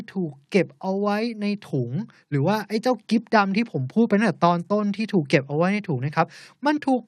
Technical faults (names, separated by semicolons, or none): none